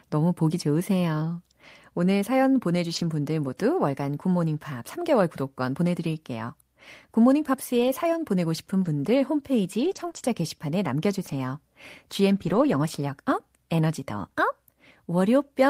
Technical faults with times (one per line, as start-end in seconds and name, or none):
2.95-3.05 lost packet rebuilt from error correction
7.79-7.89 lost packet rebuilt from error correction
8.81-8.87 lost packet rebuilt from error correction
9.79-10.21 lost packet rebuilt from error correction
10.11-10.15 short concealed packet loss
11.27-11.33 lost packet rebuilt from error correction
12.35-12.77 lost packet rebuilt from error correction